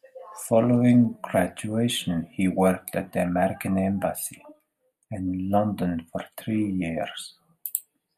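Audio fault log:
1.05–8.17 s, channel delay (comb filtering): the speech turns hollow and phasey. One channel lags the other by roughly a tenth of a millisecond, which fits a few-sample offset. Summed to mono, shared content cancels at evenly spaced frequencies, the first notch near 5 kHz.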